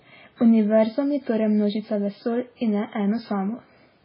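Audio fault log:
Throughout, MP3 compression: the speech has nothing above 5.3 kHz and a heavily watery, swirling texture. This is likely from an MP3 encoder short of bits, which fits a very low rate around 16 kbps. It cut all treble at a fixed point and dropped weak frequency lines, which then flicker on and off between frames. That flicker causes the swirl and metallic chirps on s sounds, and attacks smear into their surroundings.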